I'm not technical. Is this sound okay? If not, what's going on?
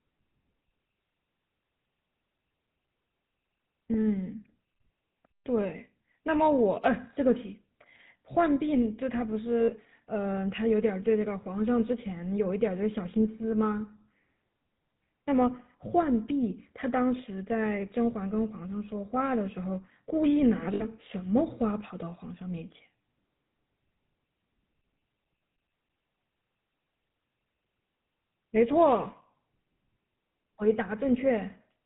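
No. The GSM full-rate codec is audible throughout. This old mobile-phone method rebuilds the voice from a rough model of the throat driven by regular pulses. That leaves the speech buzzy and gravelly, and it cuts everything above 4 kHz, so it sounds dull.

Lost GSM frames cause two short glitches, at 9.6 to 9.71 seconds and at 20.74 to 20.84 seconds. Each time, pieces of the signal went missing, and the system filled the gap by repeating the last good piece. You hear a brief rough, metallic ring.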